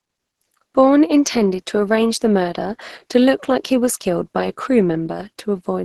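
From start to finish the speech comes across muffled and hoarse, with a rough, grainy edge and nothing above 12.2 kHz. That's likely heavy Opus compression, the encoder having dropped into its hybrid speech mode, which fits a starved rate of around 12 kbps.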